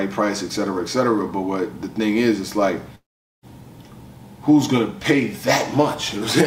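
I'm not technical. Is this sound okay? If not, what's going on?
No. Between 2.95 and 3.46 seconds, the sound breaks off for about half a second. This is a long network dropout. The audio was likely sent over a connection that briefly stopped delivering it. The player tried to cover the gap by stretching out the last bit of sound, which fades away, and then most of the gap is just silence. When the sound returns, the missing half-second is gone for good.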